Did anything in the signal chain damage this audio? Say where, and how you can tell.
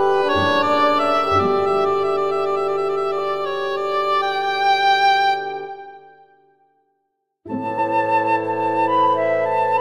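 Yes. Compressed frames are skipped in this music at 3.18–3.20 s and 7.77–7.79 s, at the codec decoding stage. The first jump loses about 20 ms, which points to one frame, and the second about 50 ms, which points to two. At each join the audio jumps ahead by the length of the frames left out.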